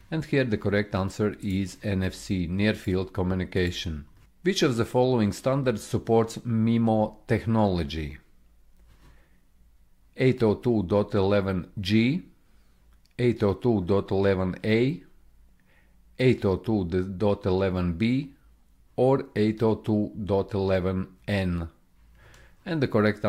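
No audible technical faults turn up anywhere in this recording.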